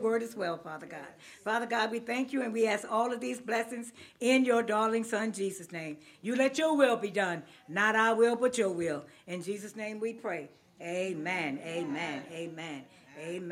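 No technical faults can be heard anywhere in the recording.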